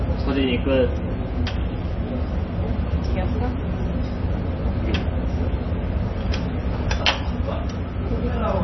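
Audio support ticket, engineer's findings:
Treble absent above 5.9 kHz throughout; watery, swirly texture and smeared attacks. Likely MP3 compression, heavy damage consistent with about 24 kbps, weak spectral lines dropping between frames.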